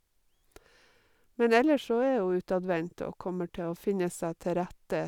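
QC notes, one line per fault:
Nothing stood out on listening to this speech recording.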